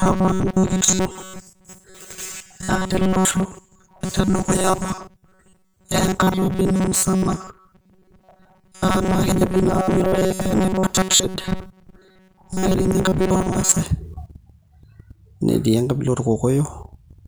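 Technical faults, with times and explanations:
0.01 to 13.8 s, robotic sound from repeated short buffers: the speech becomes a stiff, metallic buzz pitched at 188 Hz that only loosely tracks the talking. The likely cause is audio arriving too slowly, so playback keeps looping a fragment of about 5.3 ms, one period of that buzz, to fill the gaps while the real signal is dropped. Most of this stretch, roughly two thirds or more, consists of these repeats.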